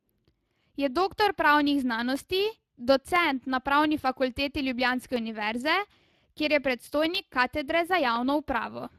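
From start to finish the speech carries Speex codec damage. It sounds plainly hoarse and noisy, as the CELP coder has too few bits for the excitation. The quality fits a bitrate of around 22 kbps. Nothing is present above 15.4 kHz.

From 0.16 s to 8.16 s, periodic USB or driver dropouts occur once every 1.0 s. There are about ten of them. Each time, roughly a millisecond of audio is replaced by silence. That happens when a stalled bus or driver skips a buffer. The gaps are heard as evenly spaced ticks in the speech.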